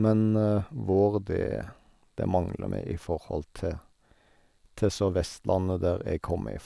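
No fault is audible anywhere in this speech recording.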